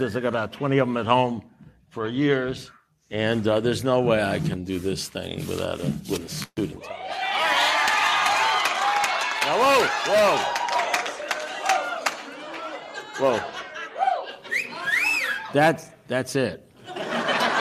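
A call audio freeze runs from 6.43 to 6.59 s. The last sound is stretched into a fading buzz or hiss that ends in about 40 ms of silence. The audio then resumes exactly where it stopped, now running 133 ms late with nothing lost, likely because delayed packets emptied the jitter buffer.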